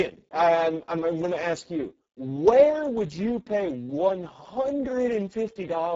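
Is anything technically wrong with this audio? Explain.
Yes. Throughout the speech, Speex codec damage is heavy: the voice sounds hoarse, buzzy and edging toward robotic. That fits a CELP setting near 6 kbps, starving the excitation of bits. Unlike MP3 swirl, the damage sits in the voice's texture, and nothing reaches above 7.8 kHz.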